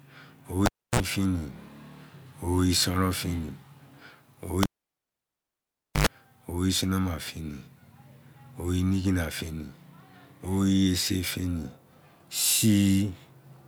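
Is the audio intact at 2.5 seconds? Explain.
Yes, at 2.5 seconds the speech plays through cleanly, with no dropout, click, distortion or other fault at that moment.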